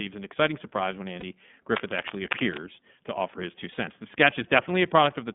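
iLBC codec, throughout the clip: the speech passes through a narrowband channel of roughly 150 Hz to 3.5 kHz, with nothing heard above that. The coding damage is plainly audible, a slightly rough, synthetic edge on the voice. That character fits iLBC's 30 ms frame mode at 13.33 kbps. Each frame's excitation is coded on its own, so the texture stays evenly coarse rather than smearing from one frame to the next.

Lost iLBC frames, 1.2 to 1.23 s, right after "an exciting surprise when": a 30 ms gap, which fits a single dropped packet. The decoder covers it by repeating the last pitch cycle mixed with noise, so the dropout is heard as a brief held, faintly buzzy vowel. Because iLBC frames don't depend on earlier ones, the voice returns cleanly almost at once.

Cable scratch noise, 1.76 to 2.59 s, ending just before "to offer his two": dense, uneven bursts of scratchy, rustling noise sit over the speech, only a few dB below it. 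The likely cause is a worn cable, connector or control being moved, with its contact resistance jumping rapidly and injecting those irregular bursts for just under a second.

Lost iLBC frames again, 3.72 to 3.78 s, just after "to offer his two": this gap is longer, 60 ms, which points to two consecutive lost frames. The concealment stretches the repeated pitch cycle further and lets it fade, giving a slightly longer breathy, buzzy hold. The following frame decodes independently, so normal speech resumes immediately after.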